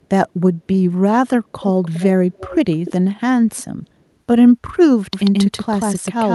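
Echo leak at 1.83–2.05 s, 2.33–2.55 s and 2.71–2.92 s: a faint 300 ms-delayed copy of the speech, quietest in the first two bursts, likely from a far-end loudspeaker the echo canceller failed to suppress. Doubled audio track from 5.13 s to the end: a second, equally loud, dry copy trails about 150 ms behind and starts abruptly, likely from a duplicate capture path.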